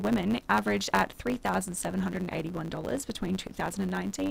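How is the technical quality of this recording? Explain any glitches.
The technical quality is compromised by one fault that runs through the whole recording: a block size mismatch (truncated). One stage hands over blocks longer than the next stage takes in, which fits 512-sample blocks being written. The end of each block is discarded, so the audio jumps forward at every join, 100 times per second. This produces a steady 100 Hz buzz, and the sound plays about 1.07 times faster while keeping roughly its normal pitch. On a spectrogram this appears as vertical lines every 10 ms with harmonics stacked at multiples of 100 Hz. In the waveform there are regularly spaced discontinuities.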